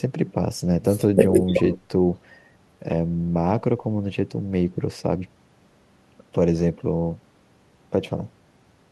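No audible technical faults.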